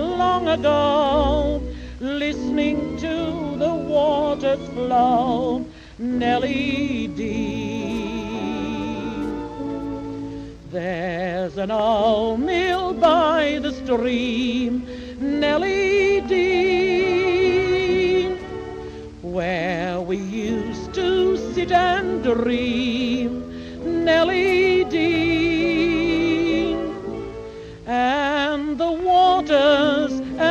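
Two clocks likely ran unsynchronised, so one sample was dropped or repeated each time their drift added up to a full sample. This produces clock slip clicks from 0.12 s to 30.47 s, recurring about every 40 ms throughout. The rate points to a mismatch of roughly 700 parts per million. At around 25 slips a second, the single-sample jumps merge into a faint, steady rattle under the sound, most noticeable on loud, bright or sustained passages and absent where the audio falls silent.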